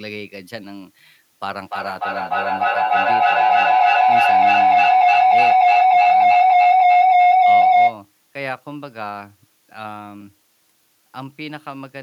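A speech recording carries a constant, even hiss from start to finish, the sound of low bit depth with dither. The signal has been reduced to so few levels, consistent with about 9-bit resolution, that the rounding error, randomised by dither, becomes steady white noise roughly 30 dB below the speech, with no grainy distortion. On a spectrogram this is a flat, uniform haze across all frequencies, filling the gaps between syllables, and the waveform never settles to a clean zero line. From 1.61 s to 8.02 s a feedback howl builds up: sound from a loudspeaker is picked up again by a microphone on the same call, and each trip round the loop adds level, so the repeats grow and narrow to a tone around 700 Hz. It peaks about 17 dB above the speech, with repeats roughly every 300 ms. A spectrogram shows a thick horizontal band near 700 Hz, and the waveform swells into a dense envelope until the loop is broken at 8.02 s.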